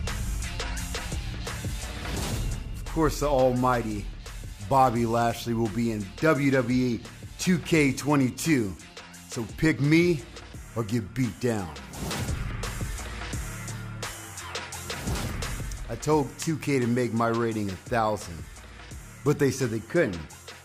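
No technical faults can be heard anywhere in this audio. There is nothing to place in time or to trace back to a cause.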